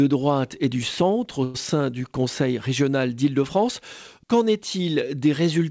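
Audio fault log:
1.44–1.56 s, call audio freeze: packets were likely held up in transit, so the jitter buffer ran dry and the receiver filled about 102 ms by stretching the last sound into a short, fading continuation. When the packets arrived, playback resumed where it had paused, so nothing is missing. Instead, a gap is inserted and everything after it plays about 102 ms later, within a band that stops at 8 kHz, which fits a G.722 wideband call path.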